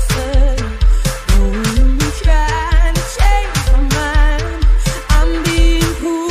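Throughout, crude rate conversion repeats nearest samples, fitting 44.1 to 48 kHz, leaving gritty inharmonic fizz roughly 30 dB down, seen as stray spectrogram lines.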